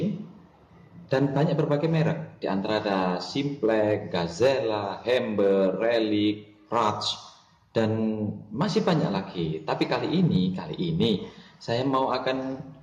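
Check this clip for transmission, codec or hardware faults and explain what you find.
No transmission, codec or hardware faults turn up anywhere in the clip.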